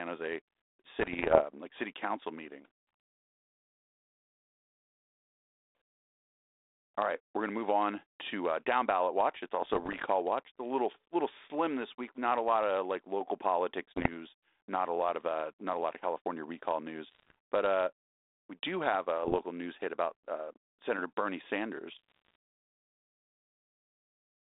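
Bit errors on an ADPCM link corrupt the speech at 0.99–1.42 s, 9.62–10.05 s, 13.96–14.09 s (just after "of like local politics"), 17.07–17.35 s, 19.23–19.39 s (between "we do have a" and "news hit about uh"), and 21.92–22.35 s. Flipped bits, at rates of about 0.7 to 2 percent, knock the decoder's step size and predictor off track. Each burst sounds as pops, rasping roughness and brief level jumps over the narrowband telephone sound.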